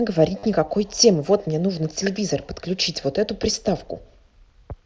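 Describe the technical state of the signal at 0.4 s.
Packets from the Bluetooth headset were lost from 0.39 to 0.43 s, about 45 ms, and concealment looped recent waveform, giving a held buzzy tone before real sound resumes.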